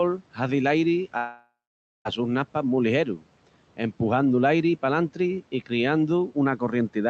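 A long network dropout runs from 1.17 to 2.07 s. The speech breaks off, the last sound drags on as a fading buzz, then 0.53 s of silence follows before audio resumes with about 0.88 s lost, likely from packets that never arrived.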